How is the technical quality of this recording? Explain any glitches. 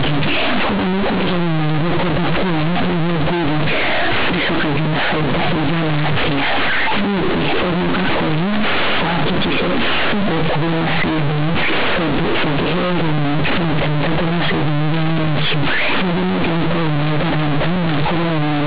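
The technical quality is poor: from start to finish the speech comes through as harsh, loud, buzzy distortion caused by companded audio read as linear. The telephone-band G.711 mu-law coding underneath is intact, so the sound is still limited to below 4 kHz.

Throughout the clip, the mu-law bytes are being played as plain 8-bit linear samples without expansion. Because mu-law stores the sign in the top bit, every polarity change throws the output across roughly half its range, and quiet passages come out as large as loud ones. This gives a grinding buzz and heavy noise in the pauses. Ordinary clipping flattens only the peaks and leaves silences quiet, but here the gaps between phrases are as loud and dirty as the speech itself.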